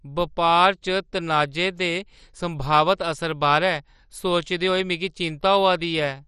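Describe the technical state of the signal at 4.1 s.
At 4.1 s you're hearing the same damage that runs through the whole clip, likely MP2 compression at a heavily starved rate, something that fits roughly 56 kbps. Layer II carves the speech into 32 sub-bands and rations bits among them. Here the top bands get nothing, so there's no content above 13.2 kHz, bands flicker in and out, and those that survive are coarsely quantised. The result is dull, gurgly, grainy speech.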